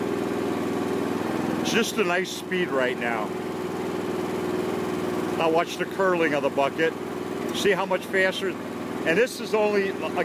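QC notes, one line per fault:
No faults turned up anywhere in this one, so there's nothing to log.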